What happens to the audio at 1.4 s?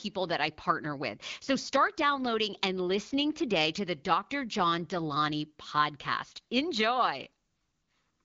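At 1.4 s the audio is intact, carried through the AMR wideband (HD Voice) codec at 12.65 kbit/s with nothing above about 7.5 kHz, and with no fault at that moment.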